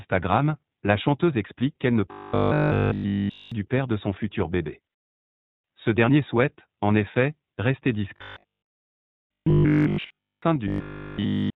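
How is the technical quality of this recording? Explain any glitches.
Quality is rough: the whole recording carries codec damage, and three stretches collapse into a mechanical buzz.

Throughout, this is iLBC codec artefacting: band-limited to about 4 kHz, with a grainy, slightly synthetic edge to the speech. Each 20 ms frame's excitation is coded independently, which fits iLBC's 15.2 kbps mode, and the roughness is plainly audible.

The robotic sound from repeated short buffers hits from 2.12 to 3.52 s (after "chanteuse explique qu'elle ne", resuming at "du père de son"), then 8.16 to 10.42 s (after "souhaite en effet rester"), and 10.68 to 11.55 s. It's a rigid 50 Hz buzz tracking the speech loosely. Audio was likely arriving late, so a roughly 20 ms chunk got looped in place of essentially all the real signal.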